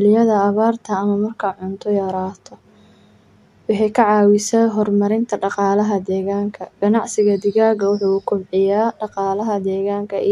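No technical faults are audible.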